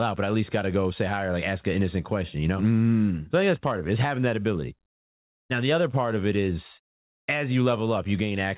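A speech recording with two faults. Likely discontinuous transmission swapped the real background for comfort noise from 4.86 to 5.5 s, giving a steady, featureless hiss about 1 dB different in level. A likely network dropout then lost about 340 ms from 6.94 to 7.30 s; the receiver briefly stretched the last sound before near-silence, and the speech resumes with that part missing. Throughout, nothing sounds above 4 kHz, which fits a G.711 call codec.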